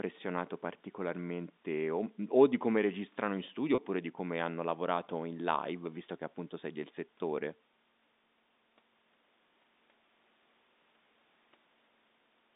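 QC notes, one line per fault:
3.75–3.78 s, packet loss with pitch repetition: right after "come registrano in studio" there's a brief buzzy hold of about 30 ms, which fits a single lost packet. The receiver looped the last pitch cycle to fill the gap, and then "oppure di come hanno" picks up over the telephone band.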